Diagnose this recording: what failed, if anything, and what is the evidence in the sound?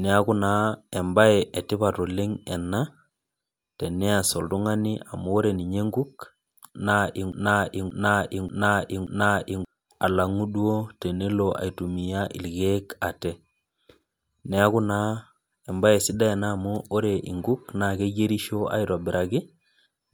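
The playback buffer likely stalled and kept resending its last 0.58 s fragment: a broken-record loop repeating four times from 7.32 to 9.65 s, erasing the intended speech.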